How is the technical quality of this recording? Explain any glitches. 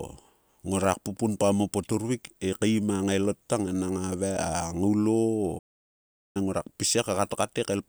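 The recording has one clear glitch, a playback stall. From 5.58 to 6.37 s the speech cuts out mid-flow for about 0.77 s, then resumes. The likely cause is the player running short of data or its thread being blocked, so output dropped to silence until it recovered. On a waveform this shows as a flat, empty gap; on a spectrogram, a blank vertical band abruptly interrupting the speech energy.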